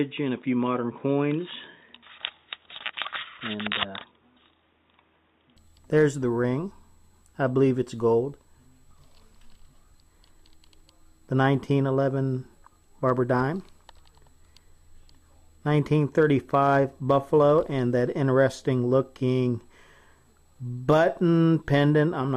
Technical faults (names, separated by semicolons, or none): input switched to a poorer device